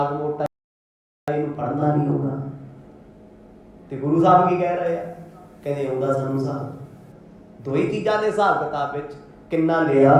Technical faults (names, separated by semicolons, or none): rebuffering stall; pre-emphasis left on